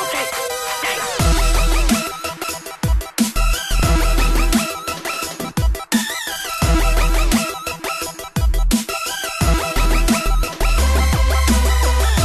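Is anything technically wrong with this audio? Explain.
Yes. At 2.43 s, 3.79 s and 9.85 s the sound lurches forward with a short, smeared blip at each join, losing roughly a tenth of a second at the first point, about half that at the second, and a few hundredths at the last. These are compressed frames skipped: whole coded frames were never played. The lost spans come in steps that fit frames of about 26 ms, and overlap between neighbouring frames softens each join.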